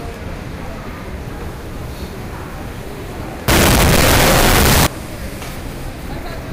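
Everyday sound. From 3.48 to 4.87 s it turns into loud, harsh distortion. Quiet parts blare as loudly as the rest. This likely comes from signed and unsigned being mixed up in 16-bit samples.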